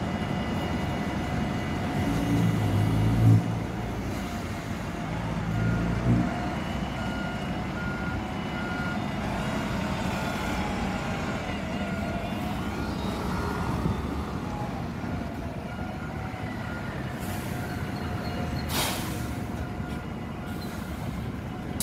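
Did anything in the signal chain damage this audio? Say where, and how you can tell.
No, nothing audible along the signal chain has damaged this audio, and the signal holds steady throughout without any disturbance that points to a particular stage.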